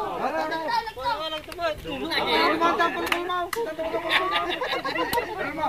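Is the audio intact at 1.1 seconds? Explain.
No. At 1.1 seconds, as across the whole clip, low bit depth without dither is audible. The sound is likely rounded down to very few levels, which fits 8-bit truncation. The error tracks the signal, giving grainy distortion roughly 35 dB below it.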